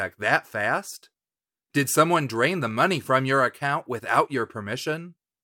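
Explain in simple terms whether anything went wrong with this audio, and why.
Nothing went wrong with it.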